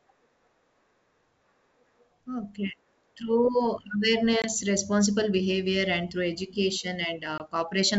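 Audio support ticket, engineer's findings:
Packet loss on an ADPCM call, 4.42–4.53 s, just before "responsible behavior". About one 20 ms packet was replaced by silence. The decoder's predictor and step size drift from the sender's, so audio resumes slightly distorted, settling within tens of ms. On the waveform, look for a flat hard-edged gap. On the spectrogram, a full-band vertical blank.

Same fault at 7.38–7.41 s, with the same 20 ms gap signature.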